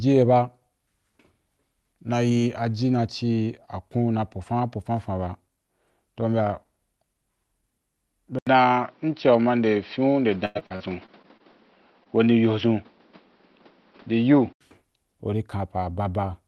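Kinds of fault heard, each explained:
Input switched to a poorer device: The recording likely moved to a different, lower-grade input at 8.39 s. After a roughly 80 ms silence at the switch, the sound turns dull, with nothing above 5.8 kHz and new background noise about 30 dB down, at much the same level, until 14.61 s.
Repeated packet loss (robotic sound): Between 10.45 and 11.42 s, audio kept arriving late or not at all, and the receiver patched seven gaps by extending the preceding sound. About a quarter of that stretch is filled-in material, the longest gap 96 ms, giving choppy delivery with pieces missing.
Short concealed packet loss: From 12.04 to 12.07 s, about 20 ms of audio failed to reach the decoder in time. The receiver bridged the hole by continuing the last sound and blending back in, which shows as a brief smear rather than a clean dropout.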